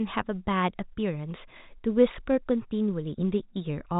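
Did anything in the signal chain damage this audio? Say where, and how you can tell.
No, the speech sits on a G.711 mu-law telephone path with nothing above 3.8 kHz, which is simply that format's bandwidth, and no stage in the chain shows damage.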